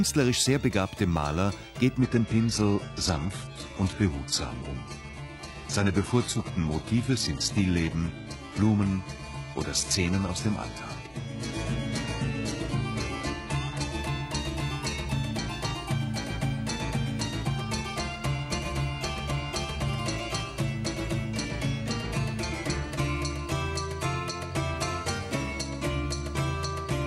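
From 1.99 s to 13.99 s the audio drops abruptly into an adaptive stream at a lower bitrate. Nothing survives above 11.5 kHz, the top end goes thin, and artefacts swell, pointing to a roughly 12 kbit/s HE-AAC fallback. Quality snaps back without a gap.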